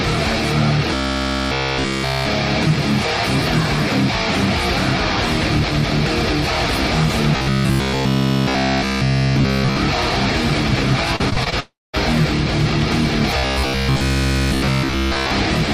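Robotic sound from repeated short buffers appears three times, at 0.94 to 2.26 s, 7.36 to 9.76 s and 13.38 to 15.31 s. In each stretch the sound collapses into a rigid metallic buzz at 66.8 Hz that only loosely tracks the underlying audio, with practically all of it made of repeats. A buzz at that rate means a slice of roughly 15 ms is being replayed over and over. The likely cause is audio arriving too slowly, so the player loops its last short buffer while the real material is skipped.

Repeated packet loss (robotic sound) runs from 11.16 to 11.54 s. Five separate gaps are patched in quick succession, with about 118 ms of the 0.38 s span filled in and the longest gap 36 ms. The receiver stretches the last sound across each hole, and the next hole arrives soon after, so about a third of this stretch is concealment. The audio turns choppy and mechanical, with pieces missing.

A long network dropout follows straight after, from 11.60 to 11.95 s, and was likely caused by the stream stalling completely. 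About 340 ms of audio never arrives. The receiver first carries the last sound forward as a fading buzz or hiss, and then, for about 220 ms, nothing is left but silence. The sound resumes afterwards without the lost portion.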